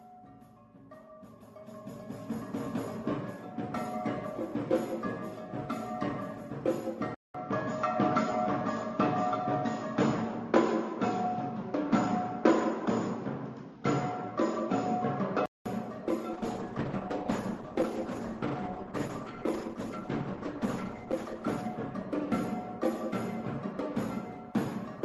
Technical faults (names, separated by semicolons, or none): input switched to a poorer device; call bitrate drop